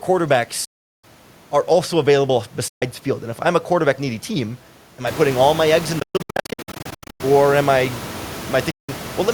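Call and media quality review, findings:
Bluetooth dropout, 0.65–1.04 s: about 0.39 s of hard silence ending just before "are also available"; likely wireless link losing audio packets to the headphones, playback muted until valid packets arrive, then resuming as if it had continued.

Bluetooth dropout, 2.68–2.82 s: about 0.13 s hole right after "are also available"; likely late or lost packets on the headphone link, output silent for the gap, sound picks up further along.

Bluetooth dropout, 6.00–7.21 s: broken-up audio between "all my eggs in" and "or am", repeated short gaps scattered over 1.2 s, longest 120 ms; likely sustained packet loss on the wireless link, each lost stretch muted rather than concealed.

Bluetooth dropout, 8.71–8.89 s: about 0.17 s silence; likely dropped packets to the headphones, playback skips ahead on recovery. Room noise rises by about 18 dB near 5 s, staying about 16 dB below speech.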